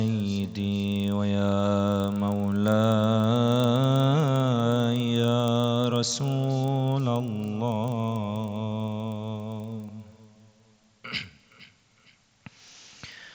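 Throughout the clip, a resampler restarted on every block leaves a tick every 40 ms, a steady 25 Hz rattle. Each block was converted from 16 kHz to 48 kHz in isolation, so every edge carries a small error. Unlike mains hum, the rattle disappears whenever the sound stops.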